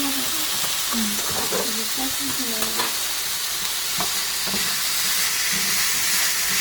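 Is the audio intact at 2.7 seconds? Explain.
No. At 2.7 seconds, as throughout, the sound is rough and grainy, its tonal parts smeared into noise. This is likely Opus compression in its music mode, which fills starved bands by folding lower ones or injecting noise, as fits a low rate near 24 kbps.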